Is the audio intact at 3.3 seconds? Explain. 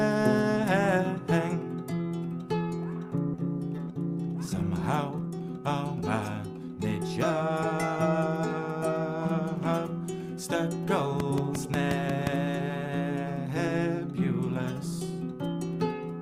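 No. At 3.33 to 3.35 s there is a skip ahead: roughly a second of audio was discarded in transit or by an overflowing jitter buffer while later audio already waited, so playback jumps forward with no gap, splicing the two sides together abruptly.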